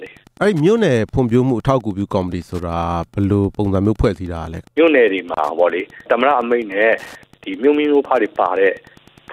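Wi-Fi interference runs throughout. A nearby radio's beacon, every 102.4 ms, is rectified by the audio circuit. It ticks steadily about ten times a second, roughly 30 dB below the sound.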